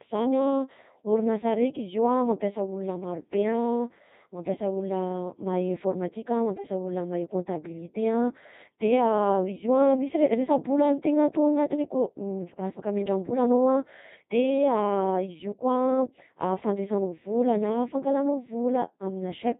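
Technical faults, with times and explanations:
Throughout: Codec 2 vocoder. The speech carries the heavy robotic buzz of Codec 2 at 2.4 kbit/s. Only pitch, voicing, energy and a coarse spectral envelope survive, and the decoder rebuilds each frame from summed sine waves, so the original waveform is gone. On a spectrogram the harmonics look unnaturally regular and evenly spaced, with smeared, blocky formants and thin high bands. The waveform shows smooth synthetic periodic cycles instead of natural irregular detail.
6.54–6.64 s: bit errors on digital voice radio. For about 0.1 s the synthetic voice lurches, with sudden jumps in pitch, level and timbre that come out as a short warbling bleep. The span fits two corrupted vocoder frames, with an error rate of around a few percent. At such a low bitrate each flipped bit changes pitch, energy or spectral parameters for a whole frame. On a spectrogram the harmonic stack jumps abruptly and the formant shape changes. 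The waveform shows a brief amplitude discontinuity.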